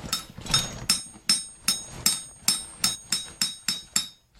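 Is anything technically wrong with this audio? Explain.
Yes. At 1.71 s and 2.94 s the audio briefly smears and lurches ahead, losing roughly a single frame's worth and then about two frames' worth. These are compressed frames skipped: damaged or missing frames go unplayed, and overlapping neighbours blur each join into a soft blip rather than a click.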